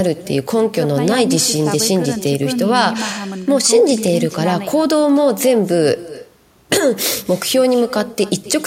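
From the start of the speech to the end, every phrase is trailed by a fainter copy of itself, arriving roughly a third of a second later. This is echo with no canceller: the far end plays the call through a loudspeaker, its microphone picks that sound back up, and nothing subtracts it before it returns across the network. The copy sits about 17 dB below the direct speech and sounds thinner.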